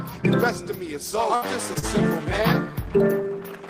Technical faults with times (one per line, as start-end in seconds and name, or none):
1.35-1.45 burst of packet loss
1.79-1.85 short stall from a late packet